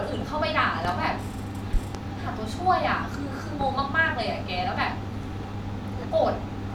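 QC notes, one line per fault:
0.85–0.93 s, 1.74–1.99 s and 3.61–3.65 s, loud pop: sharp pops sit on top of the speech, which carries on underneath. The first two are double pops, and the second peaks about 15 dB above the speech, the others about 10 dB. A likely cause is a brief voltage spike from a plug, switch, static or driver glitch.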